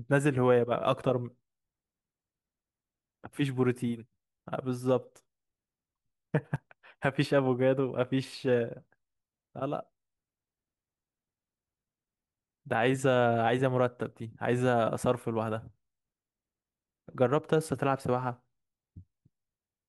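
At 1.02 s and again at 6.56 s the speech lurches forward, with no gap of silence, as if a sliver of sound had been snipped out and the ends butted together. The first jump loses around 20 ms, the second around 10 ms. This is likely a dropped buffer (overrun): the recording software fell behind, the hardware overwrote samples it had not yet collected, and the audio on either side was spliced directly.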